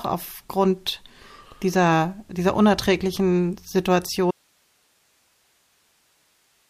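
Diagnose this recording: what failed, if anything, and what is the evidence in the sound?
At 4.31 s the speech cuts off abruptly and does not return before the end. Only hiss remains, about 45 dB below the signal. That is an audio dropout to a faint residue: the source was lost while later stages stayed live, likely from an interrupted analogue connection.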